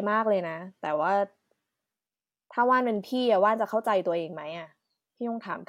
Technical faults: none

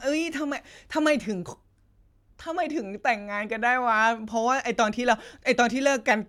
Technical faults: none

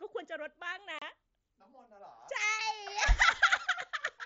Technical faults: unconcealed Bluetooth headset packet loss

